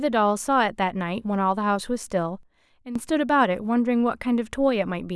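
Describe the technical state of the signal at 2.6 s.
At 2.6 s the speech sits in a sudden gain jump: from 2.43 to 2.96 s the voice and its background noise drop together by about 13 dB, then snap back. The likely cause is a digital gain change applied between adjacent samples without any ramp.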